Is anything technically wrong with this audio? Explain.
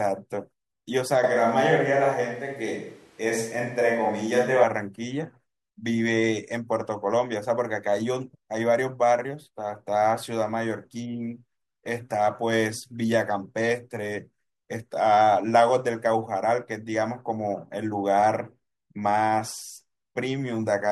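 Yes. From 1.24 to 4.64 s the speech abruptly turns roomy and hollow, thinner in the bass, with background noise about 35 dB below it, though the level barely changes. It snaps back just as suddenly. This is likely a switch to a distant microphone, with the close mic's signal replaced by one farther away.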